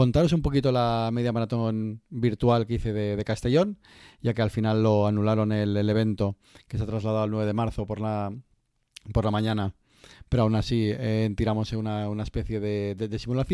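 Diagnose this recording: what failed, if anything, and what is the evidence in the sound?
Nothing failed here that I can hear; the recording runs without a break, glitch or dropout anywhere along the chain.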